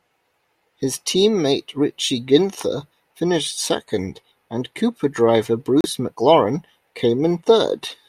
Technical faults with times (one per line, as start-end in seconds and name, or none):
5.81-5.86 Bluetooth stall